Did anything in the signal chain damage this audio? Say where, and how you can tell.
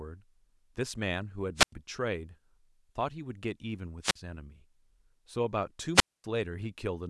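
Yes. Wireless microphone squelch dropouts hit the radio link at 1.56–1.72 s, 4.02–4.16 s and 5.94–6.24 s, with mutes of about 94, 45 and 241 ms. Rising hiss precedes each silence as the FM signal fades, unlike the clean gaps of network packet loss.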